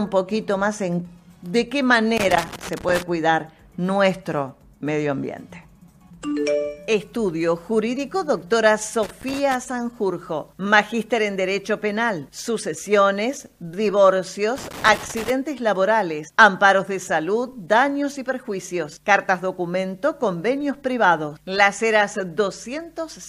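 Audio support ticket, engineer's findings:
Irregular bursts of crackle and scratching, sound chopped in and out: 2.17–3.02 s, 9.03–9.54 s, 14.56–15.30 s. Loose connector crackle. Probable component: worn or dirty jack, plug or cable contact. Contact making and breaking as the connector shifts, interrupting the signal in rapid fragments, with any DC on the line adding pops at each make/break. Intermittent, roughly half-second to under-one-second episodes. Reseat or clean contacts, replace cable if it persists.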